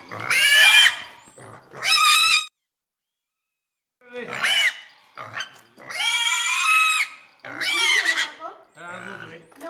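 No technical faults can be heard anywhere in these sounds.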